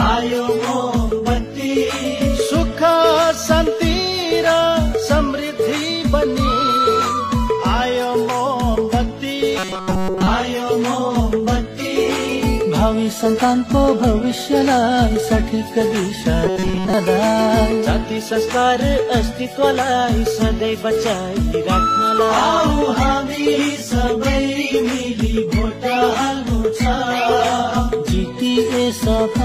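Robotic sound from repeated short buffers appears from 9.59 to 10.27 s and from 16.46 to 16.93 s: the audio collapses into a rigid metallic buzz at 188 Hz, most likely from a roughly 5.3 ms chunk being replayed over most of each stretch while fresh audio is skipped.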